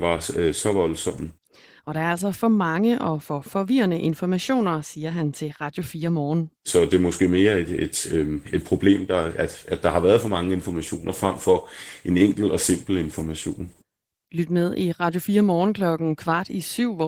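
Throughout the speech the voice sounds slightly hoarse and robotic, with a plainly audible grainy texture. This is Opus voice compression: the low-band linear-prediction coder quantises the excitation coarsely, which fits a bitrate around 16 kbps.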